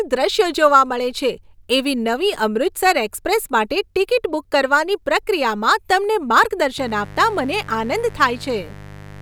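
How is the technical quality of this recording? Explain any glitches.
A mains buzz enters the speech at 6.78 s and runs to the end. Sharp switching spikes, twice per 50 Hz cycle, stack harmonics into the kilohertz range, giving a raspy buzz about 20 dB under the voice, unlike the smooth, low-pitched tone of plain hum.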